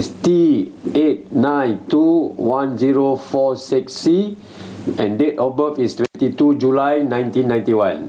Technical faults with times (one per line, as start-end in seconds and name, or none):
0.00-8.08 gain pumping
6.05-6.16 intermittent contact